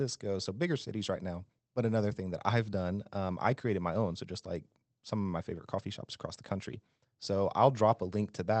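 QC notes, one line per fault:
No faults found in this speech clip. It has passed through a WebRTC call path whose high end stops near 8 kHz, with the coding texture you'd expect from Opus at around 20 kbps.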